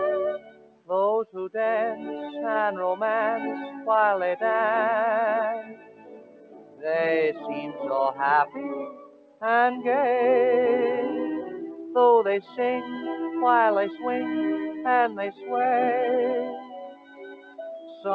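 The audio is non-speech material carried over a call link. A noise suppressor built for speech was left on, and it treats sustained content as noise. Onsets come through, but held tones, ambience and decay tails are pulled down. The level swings by roughly 10 dB. The deepest cuts land at 0.39 to 0.89 s, 5.63 to 6.85 s, 8.86 to 9.42 s, 12.42 to 12.58 s, 15.32 to 15.48 s and 16.59 to 17.59 s. At these points the sound cut by the noise suppressor sinks by about 12 dB. The dip at 12.42 s is shallower, about 8 dB, and the one at 15.32 s is about 11 dB. The call path itself adds normal coding noise and nothing above 8 kHz, which fits a wideband codec such as G.722 at 64 kbps.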